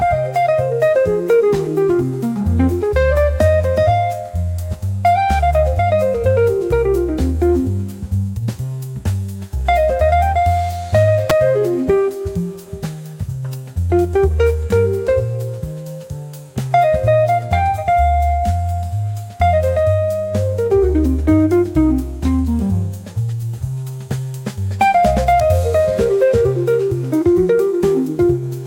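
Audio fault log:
11.30 s and 25.40 s, electrical switching spike: a nearby switch, motor or static discharge likely arced briefly, and the audio line picked up that burst of interference. Each event adds a sharp snap on top of the sound, lasting only milliseconds. The first is the louder of the two. The second peaks roughly 10 dB lower, so it comes across as a smaller click.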